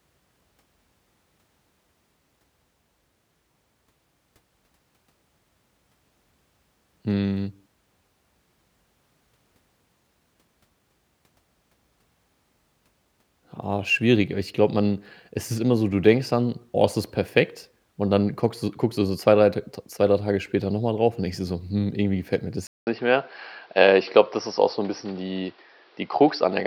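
At 22.67 s the input likely switched to a poorer device for the rest of the clip. A 200 ms silence marks the switch; afterwards nothing passes above 5.8 kHz, so the speech turns dull and boxy, with new background noise about 35 dB below it.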